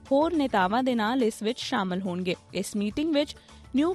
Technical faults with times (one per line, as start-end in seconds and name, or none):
none